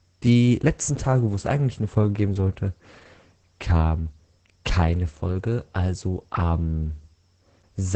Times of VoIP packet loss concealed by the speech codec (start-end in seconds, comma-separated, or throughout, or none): none